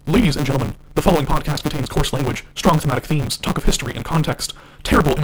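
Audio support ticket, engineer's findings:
Steady 150 Hz buzz through the whole speech clip, and everything runs 1.6x fast with timbre intact. Looks like block size mismatch (truncated). Upstream stage writes longer blocks than the next one reads, so each block's tail gets dropped. Fits 512-sample writes.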